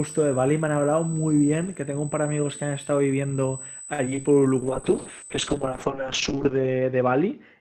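A USB whine at 8 kHz runs through the whole recording, roughly 15 dB below the speech. It is ground or power leakage from the bus's 125 microsecond microframes, and it shows on a spectrogram as a steady horizontal line.

From 3.93 to 4.25 s, repeated packet loss (robotic sound) punches five gaps, the longest 54 ms. Concealment stretches the preceding sound into about 37% of that span, giving choppy speech with pieces missing and smeared, repeated-looking spectral blocks.

At 4.61 s a call bitrate drop takes the encoder from 32 to 8 kbps, staying at the lowest rate for about 1.7 s. Coarser coding makes the speech watery and muffled, and the spectrogram's upper energy cuts off abruptly near 8 kHz instead of 20 kHz.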